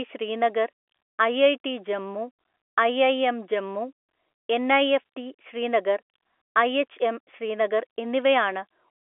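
No technical faults are audible.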